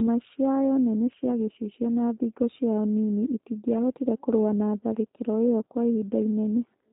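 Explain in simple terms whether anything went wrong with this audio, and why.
Throughout the speech, G.729 codec damage is plainly audible. The codec rebuilds the voice from a simplified model, so it sounds rough and slightly synthetic, with nothing above about 3.7 kHz. A plain telephone band-limit would sound muffled but still natural.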